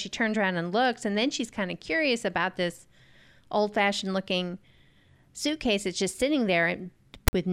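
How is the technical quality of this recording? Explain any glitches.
There's one clear glitch, right at the tail of the speech. From about 7.28 to 7.33 s you get file tags played as audio: a short block of tag data got read out as if it were sample values. The text part comes through as a loud, harsh rasp, lopsided because character bytes sit off-centre rather than swinging around zero, and then the zero padding drops to dead silence. It's about 50 ms of hard-edged static that starts and stops abruptly.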